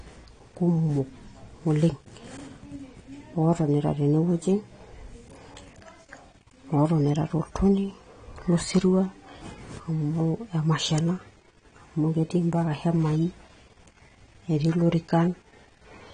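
Speech runs throughout with a dull, smeared top end and fizzy, blurred sibilants, the plainly audible mark of likely AAC compression at a low bitrate, roughly 32 kbps. A spectrogram would show a hard ceiling at about 9.9 kHz, with patchy, gappy bands beneath it.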